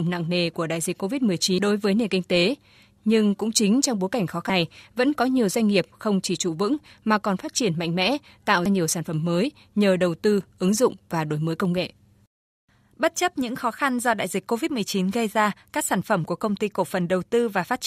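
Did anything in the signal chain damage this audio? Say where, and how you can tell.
Yes. The damage sits in the codec stage, as damaged data in a compressed stream. Three brief glitches break the speech, at about 1.58, 4.50 and 8.66 seconds. Each is very short, only a few milliseconds. They sound like sharp blips, not like analogue noise or clipping. Corrupted bytes reached the decoder at those points. It could not read the affected frames correctly and lost sync. It then resumed at the next valid frame header.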